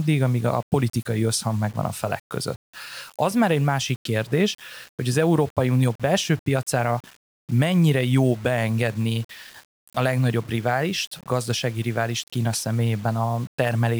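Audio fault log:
throughout, low bit depth without dither: the speech was likely requantised to very few levels, pointing to about 6 bits, and rounded without dither, so the error follows the signal as grainy distortion roughly 30 dB below it, grittiest on quiet passages and decaying sounds.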